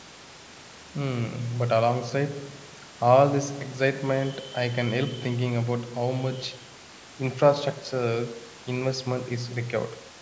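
No technical faults can be heard in this speech.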